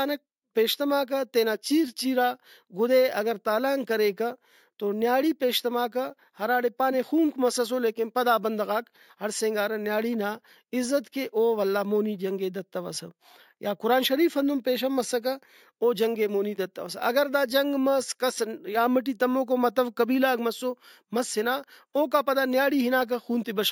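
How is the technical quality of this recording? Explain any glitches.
The recording has one fault that runs from start to finish: imaging from sample-and-hold upsampling. The audio appears to have been raised from a 16 kHz rate to 48 kHz by simply repeating each sample, with no smoothing filter. That leaves a mirrored copy of the speech spectrum folded upward, strongest between 8 kHz and 16 kHz and about 19 dB below the speech itself. It comes across as a bright, metallic fizz that swells and fades with the speech. What separates it from codec hiss is that, within that lowest copy, rising speech pitch makes the fizz slide down.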